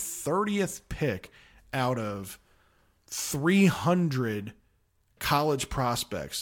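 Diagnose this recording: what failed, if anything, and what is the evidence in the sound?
Nothing failed in this recording.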